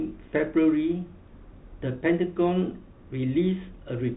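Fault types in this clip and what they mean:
Bluetooth CVSD headset codec: one-bit up/down coding with adaptive step, fitting 64 kbit/s; the speech is cut off above 3.8 kHz, with clearly audible grainy, scratchy distortion.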